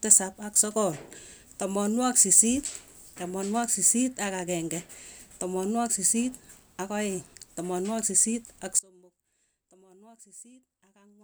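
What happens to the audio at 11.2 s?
At 11.2 s the speech remains lost in an audio dropout to a faint residue, running from 8.79 s to the end. The signal likely broke while the later path stayed live, leaving a faint leak roughly 25 dB down. The waveform abruptly shrinks to a thin band, and the spectrogram goes nearly dark.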